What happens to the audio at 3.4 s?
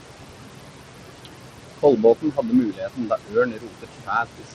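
At 3.4 s the speech is caught by the noise suppressor, in a stretch running from 2.22 to 4.53 s. The suppressor mistakes parts of the speech for background noise and pulls them down by up to about 22 dB, so soft consonants and word endings sound swallowed, adding up to roughly a second and a half. The dips follow the speech itself, which separates this from a simple level drop or a dropout.

Noise suppressor artifacts are present here too, and through the whole clip. Band by band, the suppressor lowers what it judges to be steady noise by about 21 dB. The room noise, about 9 dB under the speech, therefore sinks in pauses and comes back under speech. This is a pumping background, unlike the steady tick of the next fault.

The filter restarted on every block also runs throughout. Each block begins from a cleared state, and the small transient at every start forms a 100 Hz buzz that gets louder and softer with the signal. 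It is regular and tonal, unlike the pumping of the suppressor.

The sound is gritty and coarsely quantised, with nothing above 14.9 kHz, so the treble drops out. That points to Bluetooth SBC compression as the likely cause, at a fairly low bitrate around 80 kbps. Its damage is constant, not tied to pauses.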